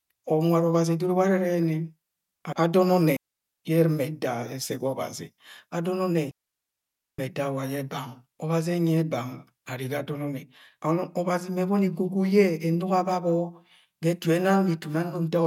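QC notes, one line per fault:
3.17–3.44 s: digital wireless dropout. The receiver mutes for about 0.27 s after losing too much data, leaving a clean gap with no noise burst.
6.31–7.19 s: digital wireless dropout. A longer mute, about 0.87 s, with the same quick fade into near silence and no crackle or hiss around the hole.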